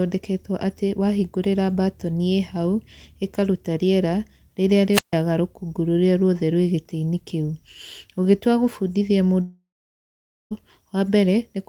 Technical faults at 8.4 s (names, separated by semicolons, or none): none